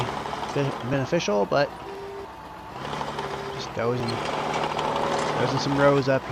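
From 0.94 s to about 6.05 s there are periodic USB or driver dropouts, roughly every 1.02 s. Something keeps stalling the audio path, and each time a couple of milliseconds get skipped outright. You hear about seven regular ticks riding on the sound.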